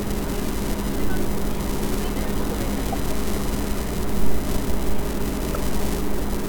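Repeated frames stutter at 0.45–0.47, 2.92–2.95 and 5.53–5.58 s. Compressed frames play twice, replaying 24, 24 and 48 ms of sound. Each replay adds its length to the audio.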